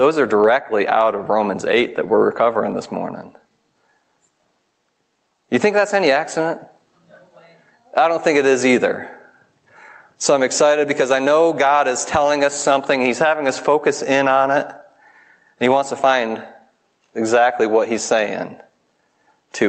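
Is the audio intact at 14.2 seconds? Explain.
No. At 14.2 seconds, as throughout the clip, there is gain pumping: the level ducks under each loud sound and swells back in the gaps, swinging around 10 dB. The likely cause is excessive input gain feeding a fast limiter or compressor, which squashes the dynamics.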